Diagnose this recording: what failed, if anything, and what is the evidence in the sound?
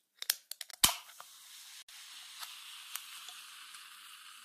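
The codec stage failed with corrupt frame muted. The sound drops abruptly to silence at 0.71 to 0.76 s, about 50 ms, and again at 1.79 to 1.90 s, about 110 ms. The decoder rejected damaged compressed frames and the player filled them with silence, keeping timing intact.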